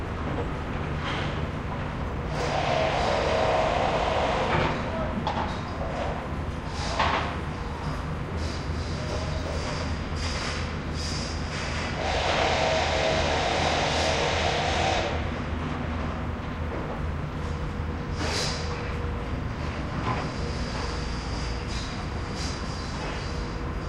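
Sound recording with no technical fault detected anywhere in the audio.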